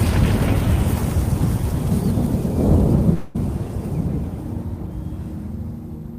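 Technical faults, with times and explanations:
3.13 to 3.37 s, call audio freeze. The sound halts and its last moment is drawn out as a fading buzz for 214 ms. Nothing is dropped. The audio then resumes where it stopped, now running 214 ms later. Delayed packets likely emptied the jitter buffer.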